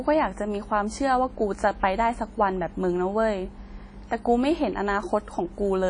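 Speech that sounds ringing and washy throughout, with hiss pumping alongside the voice and nothing above 10.1 kHz, likely WMA compression at a low bitrate near 32 kbps.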